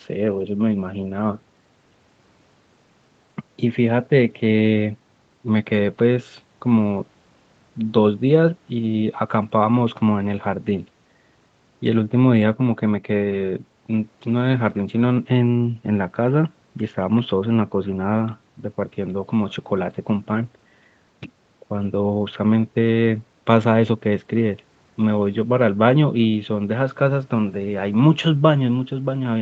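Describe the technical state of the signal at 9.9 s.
At 9.9 s the speech is intact, with no fault, and only the band limit of the call path can be heard, with nothing above about 8 kHz.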